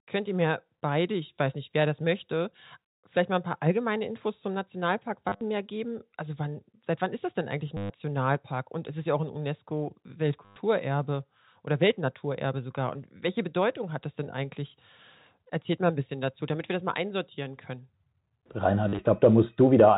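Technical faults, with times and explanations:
5.29–5.41 s, 7.77–7.90 s (just after "das denn eigentlich ein"), 10.45–10.56 s and 18.89–18.99 s: packet loss with last packet repeated. Each gap of 70 to 130 ms is filled by replaying the previous short block, which fits 10 ms packets. Because the repeats don't line up with the pitch, the joins buzz at about 100 Hz, giving a brief robotic stutter over the telephone-band sound.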